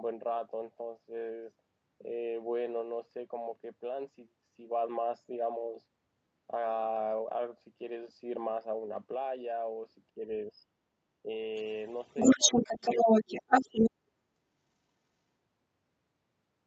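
Speech suppressed in double talk occurs at 10.15–10.28, 11.23–11.27, 12.37–12.70 and 13.22–13.76 s. The speech dips by about 10 dB, and by about 30 dB in the last dip, most likely because an echo canceller turned both talkers down while they overlapped. The other side's voice leaking through is heard from 11.55 to 13.91 s at roughly 10 dB relative to the speech, likely as loudspeaker playback that the echo cancellation did not fully remove from the microphone. All of this speech reaches the listener through a band-limited call codec that cuts off above 8 kHz.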